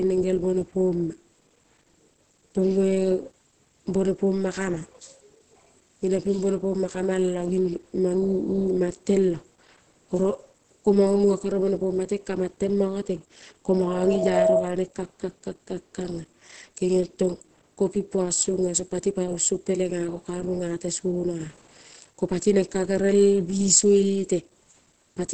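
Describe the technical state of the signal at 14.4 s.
At 14.4 s a loudspeaker feedback squeal is in progress. It runs from 13.73 s to 14.73 s. A microphone is picking up the loudspeaker it feeds, and at 645 Hz the loop gain has passed unity, so that frequency reinforces itself on every trip around the loop. It swells over roughly 0.7 s into a steady single-pitched howl. By 14.4 s it sits around 5 dB above the speech, dominating the signal until it ends about a third of a second later.

Under the squeal, and through the whole clip, the speech is muffled and hoarse, with nothing above 8.7 kHz. This is likely Opus compression running in its SILK speech mode at wideband, which fits a low bitrate around 16 kbps. SILK models the voice rather than preserving the full spectrum, so the top band is cut off and the voiced sound takes on a hoarse texture. At this bitrate the codec damage is plainly audible.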